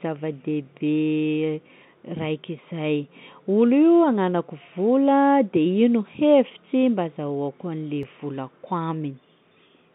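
A dropped buffer (overrun) at 8.03 s is heard as a small jump in the speech. A few milliseconds of audio vanish, and the two sides join directly with no gap. The likely cause is software failing to collect its samples before the hardware overwrote them.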